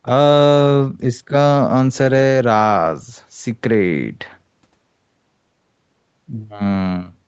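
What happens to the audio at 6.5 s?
At 6.5 s the speech runs on intact, with no dropout, glitch or distortion, only the call path's usual band limit leaving nothing above 8 kHz.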